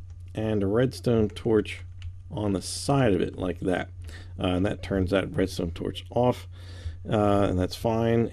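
No technical faults are audible.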